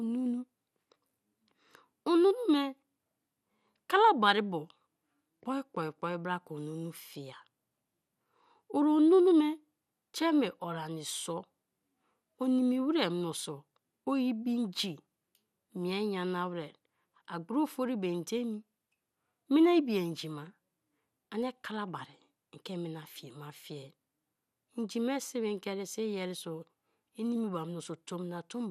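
From start to end the speech carries plainly audible MP2 compression damage, likely from Layer II coding at a rate that fits about 80 kbps. Starved sub-bands switch off and flicker, giving dull, gurgling graininess, and a spectrogram shows nothing above 14.6 kHz, with patchy upper bands.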